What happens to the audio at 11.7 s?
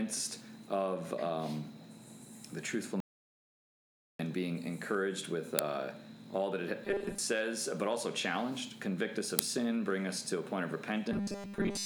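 At 11.7 s the sound is caught in robotic sound from repeated short buffers, which runs from 11.12 s to 11.85 s, the end of the clip. It becomes a rigid, metallic buzz at 200 Hz. The likely cause is audio arriving too seldom, so a 5 ms slice is replayed to fill each gap, and most of the span is repeats rather than real audio. A spectrogram shows flat harmonics stacked every 200 Hz, and the waveform shows identical 5 ms cycles repeating.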